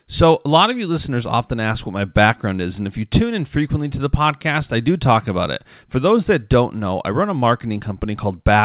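There are no technical faults to describe in time order; the speech simply carries the narrow telephone-band sound of a call path, with nothing above about 4 kHz, which fits a G.711 mu-law codec.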